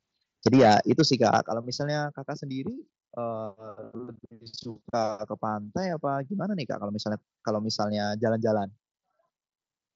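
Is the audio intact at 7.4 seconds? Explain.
Yes, the audio is intact at 7.4 seconds, with no fault there, only the normal wideband sound of the Bluetooth mSBC headset path, which carries the speech up to about 7.7 kHz.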